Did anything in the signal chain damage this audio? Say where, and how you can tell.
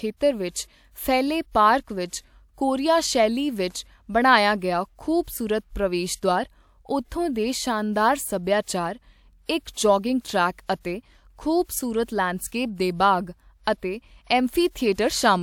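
Yes: pre-echo at 5.23, 10.21, 11.63, 12.04, 12.47 and 14.94 s, in the codec. A hiss of 35 to 59 ms precedes attacks, as block-wide quantisation noise fills the quiet before them.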